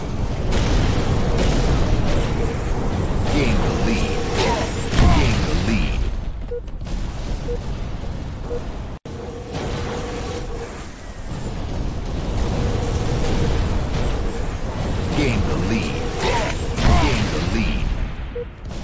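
No faults; the call path is band-limited with nothing above 8 kHz, consistent with a wideband codec such as G.722.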